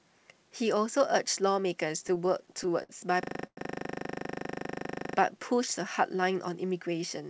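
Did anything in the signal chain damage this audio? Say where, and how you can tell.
Yes. Repeated stalls (stutter) occur between 2.08 and 2.91 s, a network and jitter-buffer fault. The speech halts seven times, each gap filled by continued sound. The longest lasts 58 ms. Packets arrived late, so the buffer kept emptying. About 14% of that span is concealment, and nothing is lost.

A system hang loop runs from 3.23 to 5.16 s, a driver or buffer fault. One 40 ms fragment repeats exactly, 46 times. That repeats at 25 Hz. The computer stalled while the hardware kept replaying the same ring buffer, which fits a 40 ms buffer.

A call audio freeze sits inside that loop, from 3.47 to 3.59 s. The last sound is stretched for 100 ms and fades to about 50 ms of silence. The audio then resumes 100 ms later than before. The likely cause is packets held up in the network.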